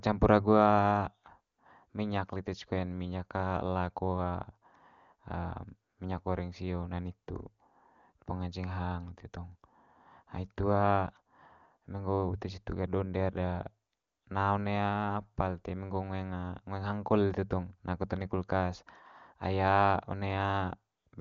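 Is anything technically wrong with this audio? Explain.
No, nothing stood out on listening: the speech comes through the AMR wideband (HD Voice) codec at its top rate of 23.85 kbit/s, with the band ending at about 7.3 kHz as that codec's wideband range would lead one to expect.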